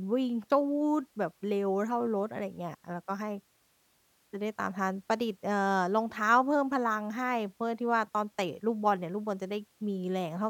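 No technical faults are audible.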